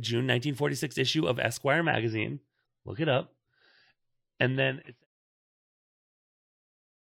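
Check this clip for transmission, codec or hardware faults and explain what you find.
There's one fault here: adaptive stream at a lower bitrate. From 1.82 s to the end, quality drops suddenly with no gap. The stream switched to a leaner version, and everything above 5.8 kHz vanishes, so the speech turns dull, which fits a step from about 128 down to 24 kbit/s MP3. The smooth fade-out, starting around 4.5 s and finishing at 5.07 s, sits inside that degraded stretch.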